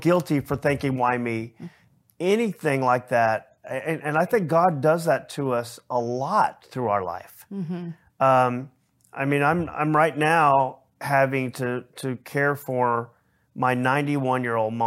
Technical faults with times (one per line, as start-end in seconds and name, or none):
none